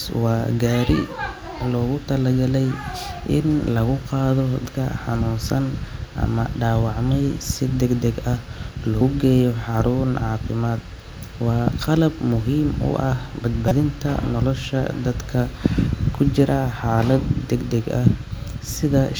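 At 4.66 s after "in lagu qaado", at 9.01 s before "geeyo xarun", and from 13.68 to 13.72 s after "qalab muhiim u ah", damaged data in the compressed stream makes the decoder lose sync, giving brief glitches that show as waveform discontinuities.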